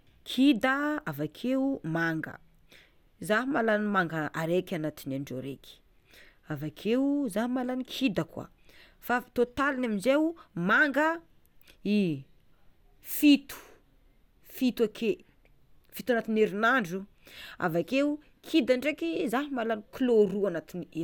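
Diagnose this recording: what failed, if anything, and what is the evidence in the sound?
No fault detected anywhere.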